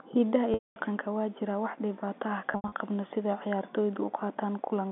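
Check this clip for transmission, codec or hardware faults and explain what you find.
Two dropouts from packet loss with pitch repetition occur on a G.711 telephone-band signal. At 0.54 s, 220 ms is lost. At 2.52 s, 140 ms is lost in scattered gaps over 200 ms, the longest 80 ms. The receiver loops the last pitch cycle, producing a brief buzzy hold that fades to silence before a cross-fade. On a waveform, this looks like identical repeating cycles decaying. On a spectrogram, it shows as flat harmonic stripes fading out.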